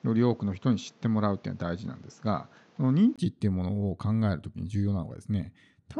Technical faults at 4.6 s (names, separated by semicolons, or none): none